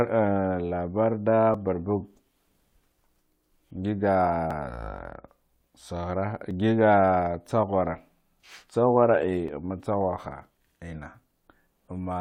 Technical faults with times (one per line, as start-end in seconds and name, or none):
1.54 overlap between stream segments
4.51 overlap between stream segments
6.51 overlap between stream segments
9.48 overlap between stream segments